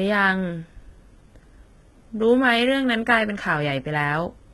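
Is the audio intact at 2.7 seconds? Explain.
No. HE-AAC compression affects 2.7 s, as it does the whole clip. The speech has a hard ceiling with nothing above about 11.8 kHz, and its upper register sounds synthetic, with s sounds coming out gritty and metallic. This is likely spectral band replication. Only the lower spectrum is coded, and the treble is rebuilt by copying those bands upward under a coarse envelope, so the harmonics don't align across the crossover. The heavy damage fits a very low bitrate, around 16 kbps.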